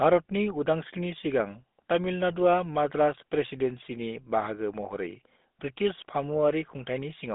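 From start to finish the speech has gone through a GSM full-rate codec, the first GSM mobile phone coder. It rebuilds the voice from a vocal-tract model driven by a coarse, regularly spaced pulse excitation, which gives that plainly audible buzzy, gravelly roughness, and the data rate fits the 13 kbps of that codec. The sound sits in a phone-line band of roughly 200 Hz to 3.6 kHz, with nothing at all above 3.8 kHz.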